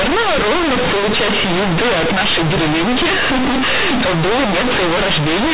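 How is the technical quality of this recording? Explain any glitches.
The technical quality is poor: the speech comes through as harsh, overloaded distortion for its whole length, caused by companded audio read as linear.

Throughout the clip, A-law G.711 telephone bytes are being played as plain linear 8-bit samples, with no expansion back to a linear scale. Because A-law packs its sign and logarithmic level into each byte, every sign change throws the output across roughly half its range, so quiet and loud passages come out equally large and the waveform is badly misshapen. The result is very loud, buzzy distortion over the speech, with heavy noise filling the pauses. The underlying 8 kHz A-law coding itself still limits the band to below 4 kHz, but that telephone character is buried under the misread samples.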